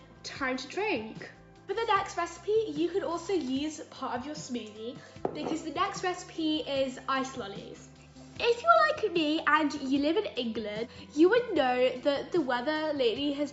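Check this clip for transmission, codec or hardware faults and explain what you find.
No transmission, codec or hardware faults.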